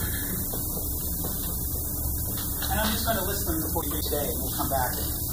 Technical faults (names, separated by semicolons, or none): low bit depth with noise shaping; frames out of order